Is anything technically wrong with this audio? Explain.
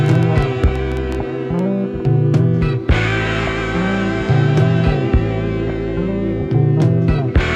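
Yes. From 0.06 to 1.60 s, a train of clicks, likely from interference or a faulty connection, adds about fifteen similar pops at an irregular 8.5 per second over the sound.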